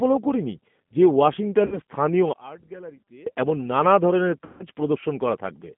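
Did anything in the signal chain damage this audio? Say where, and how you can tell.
Yes. Throughout, the sound is narrow, roughly 150 Hz to 3.4 kHz, with a rough, synthetic edge. This fits a G.729 codec at 8 kbit/s, which rebuilds speech from a filter and sparse pulses.

At 1.66 to 1.78 s and again at 4.45 to 4.66 s, the sound is stretched and fades, then returns weak or distorted. This is VoIP packet loss concealed by the speech codec, consistent with about 60 ms and 150 ms of lost packets.

From 2.33 to 3.26 s the level drops about 24 dB and turns faint. The likely cause is one channel inverted in the playback or mixing stage, cancelling the shared content when summed to mono.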